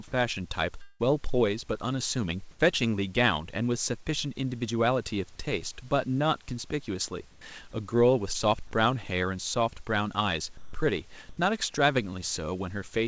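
From 0.82 to 1.01 s, about 0.18 s of speech is lost to a likely long network dropout. The last sound is stretched into a fading buzz or hiss. On a spectrogram, the harmonics smear into flat horizontal streaks that decay.

At 2.51–2.59, 7.31–7.41, 10.57–10.73 and 11.29–11.37 s, the room background is swapped for steady, featureless hiss. It shifts by about +3, −2, +2 and +1 dB, which is likely comfort noise in place of the background. Each one shows as a smooth, textureless grey patch below the 8 kHz G.722 ceiling.

At 9.85–9.88 s, a short concealed packet loss fills a 20 ms gap by continuing the last sound. It is heard as a brief smear and shows as a blurred vertical seam.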